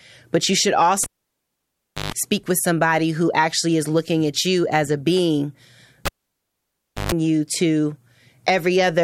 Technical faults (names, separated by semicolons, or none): cable pulled and plugged in